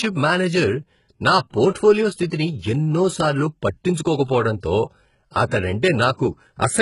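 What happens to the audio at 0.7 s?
At 0.7 s the speech carries the same damage heard from start to finish, likely HE-AAC compression. Only the lower band is truly coded; the treble is copied up from below and shaped by a coarse envelope, so its harmonics don't line up, leaving s sounds gritty, metallic or lispy. The heavy damage fits a very low bitrate, around 12 kbps. A spectrogram shows blocky, repeated upper bands and nothing above 11 kHz.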